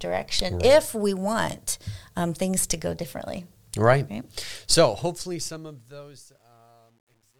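From 4.41 s to the end at 7.39 s, the speech's fade-out turns gritty and grainy, worst from 5.52 s onward. This is truncation distortion on a fade: the quietest samples snap to coarse steps without dither, which fits an 11-bit gain stage.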